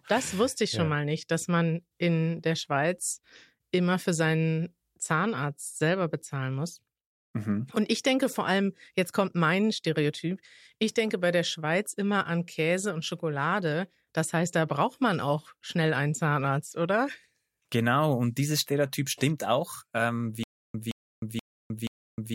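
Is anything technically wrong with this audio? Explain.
Yes. Stutter with silent gaps, 20.44 s to the end: a stalled stream likely replays a 171 ms burst every 479 ms, with digital silence between.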